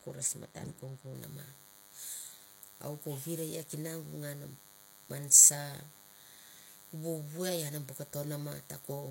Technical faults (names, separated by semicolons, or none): DECT cordless phone buzz; pre-emphasis left on